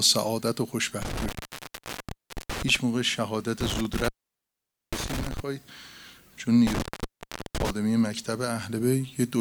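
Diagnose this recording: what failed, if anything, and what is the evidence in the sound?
A loose connection in the analogue wiring, an intermittent contact, opened three times. Each event spans 1.02 to 2.76 s, 3.6 to 5.4 s and 6.67 to 7.7 s. Within these, the signal drops out for about 1.21 s, 0.84 s and 0.72 s respectively, with crackle at the edges where the plug or cable makes and breaks. While the circuit is open, the programme is gone and only faint hiss remains.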